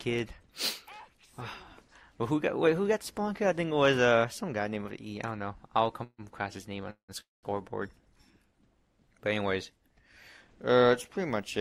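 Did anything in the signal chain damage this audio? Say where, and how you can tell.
Yes: a call audio freeze in the network path at 6.03–6.21, 6.90–7.11 and 7.20–7.46 s. Each gap fades from a continuation of the last sound into silence, then audio resumes where it stopped, delayed 150, 181 and 224 ms. Nothing is skipped, unlike packet loss. Likely late packets emptied the jitter buffer.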